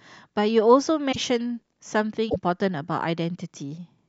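At 1.11 s the speech skips forward and there's a short garbled stretch lasting to 1.17 s, and the same thing happens again from 2.29 to 2.36 s. Each spans roughly two to three 26.1 ms frames, which is likely a broken MP3 bit reservoir. Frames went missing, so the frames right after each gap reached back for borrowed data and decoded someone else's bytes instead, giving that brief mangled patch before things recover.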